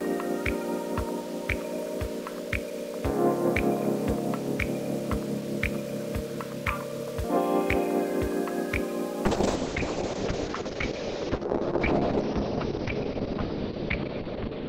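Throughout, a gritty grain sits only about 20 dB below the audio and follows its level, likely from undithered rounding to roughly 6 bits (low bit depth without dither). From 9.29 s to the end, a call bitrate drop from 64 to 6 kbps leaves the sound watery and rough, with the top cut from 20 kHz to 6 kHz, unlike a simple low-pass filter.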